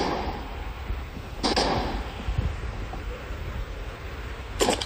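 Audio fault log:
1.43 to 1.63 s and 3.39 to 3.58 s: frames out of order. In each stretch two adjacent blocks of about 93 ms play in swapped order, so the audio jumps ahead and then back. This produces a garbled flutter, and no time is lost.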